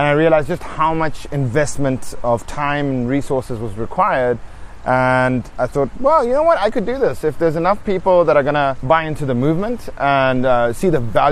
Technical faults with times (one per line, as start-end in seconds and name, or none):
none